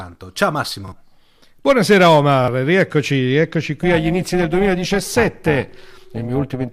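At 0.88 s and again at 2.44 s, the speech stutters as a repeated buffer. New audio failed to arrive in time, so the playback device replayed the previous 40 ms block once more. Each event sounds the same short fragment twice with a hard splice at the join. Around 40 ms of the real signal is skipped each time, so the speech jumps slightly forward after each stutter.

From 3.83 s to the end, the speech takes on a rough, buzzy, robotic quality. This is overlap-add ripple. The signal was processed in windowed frames and reassembled with an overlap whose windows do not sum to a constant gain, so the level swings by about 11 dB once per frame. At a frame rate of around 400 Hz, this fast modulation is heard as a metallic buzz with extra tones around each note across the whole passage rather than as a flutter.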